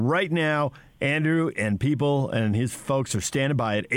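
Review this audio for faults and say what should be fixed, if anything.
No faults; nothing to fix.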